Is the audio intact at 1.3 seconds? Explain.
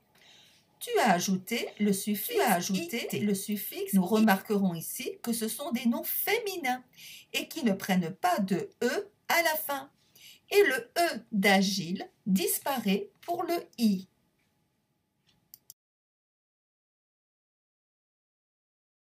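No. At 1.3 seconds a doubled audio track is sounding: a second, equally loud copy of the sound trails the first by about a second and a half, dry and full-band, from the clip's start until it cuts off abruptly at 4.24 s. The likely cause is a slower second capture path or an edit holding two out-of-step copies.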